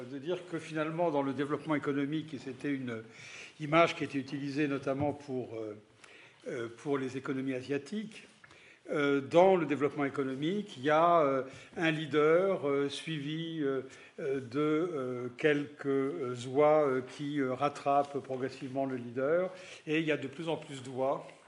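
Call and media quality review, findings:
No audible faults found on review; no symptoms to log against any component.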